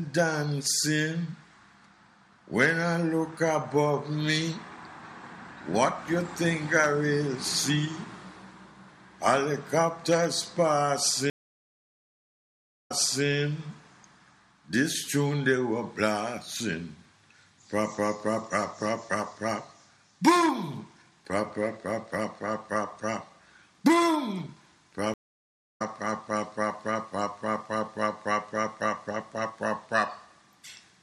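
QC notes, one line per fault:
11.30–13.25 s, stream reconnect: about 1.59 s of dropout, then playback picks up 0.37 s earlier, so a short stretch repeats as the server resends buffered audio.
25.14–25.82 s, stream reconnect: a 0.65 s gap after the connection breaks, and the audio resumes roughly 0.7 s further on, so a chunk is skipped.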